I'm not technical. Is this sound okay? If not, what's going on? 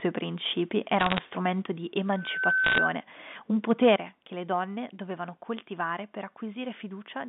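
No, there are four kinds of problem in this speech.

From 1.0 to 1.19 s, and again from 2.64 to 2.78 s, there is a burst of crackle and sharp ticks. These are bit errors on a digital phone line. Tiny pieces of data got corrupted on the way, and each damaged sample jumps to the wrong value and clicks. The ticks land at random and don't follow how loud the talking is. That is how you can tell them apart from the overload described below.

From 2.15 to 2.91 s a single steady high tone, around 1.5 kHz, swells up over about a third of a second. It ends up somewhat louder than the speech itself. This is loudspeaker feedback squeal. A microphone is hearing the loudspeaker it feeds, and one pitch keeps going round and round the loop, growing each time. Unlike crackle, it is one clean, held pitch.

From 3.7 to 3.94 s, just before "che le donne dovevano", the loudest parts turn harsh and gritty. 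This is microphone overload, likely from the microphone's input being set too high. The peaks are too big to fit, so their tops get chopped off. The roughness follows the loud moments instead of falling at random.

At 1.62 s, and more noticeably at 3.96 s right before "che le donne dovevano", everything suddenly gets quieter, the voice and the background together. This is the microphone volume being stepped down. The call software likely lowered the input level after hearing sound that was too loud. The drop happens all at once rather than fading. The second, bigger one comes right after the overload.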